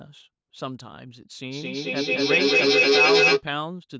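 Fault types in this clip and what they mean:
Feedback echo between two devices: from 1.48 to 3.46 s, the sound returns again and again at a steady spacing of roughly a fifth of a second, each pass thinner and more metallic. A second device in the same room is replaying this microphone's signal, which the microphone then captures again; neither echo canceller can remove audio played by the other device. Here the loop peaks at about 10 dB above the speech, so the repeats stack up rather than fading.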